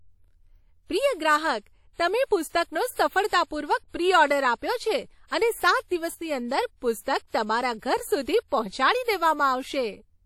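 Lossy transform coding, likely WMA compression at a rate that fits roughly 48 kbps, runs through the whole speech recording. Its long-block quantisation noise gives a ringing, washy quality with hiss that swells and fades with the voice, and nothing is heard above 18.7 kHz.

Pre-echo appears from 2.48 to 2.53 s and again from 7.01 to 7.06 s. In each case the codec spreads the noise meant for a sharp onset across the quiet stretch before it, so a short hiss of about 50 ms leads in and the attack sounds smeared.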